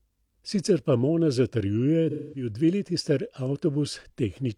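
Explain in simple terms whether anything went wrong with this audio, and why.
Between 2.10 and 2.49 seconds, the speech turns briefly smeared and hazy, as if the sound blurred into a noisy wash instead of staying crisp. This is AAC frame loss with concealment. The compressed audio arrives in small chunks, and a run of them, about 0.21 seconds' worth (roughly five chunks), went missing. The player filled the gap by reusing and scrambling the last good sound, which produces the blurred patch.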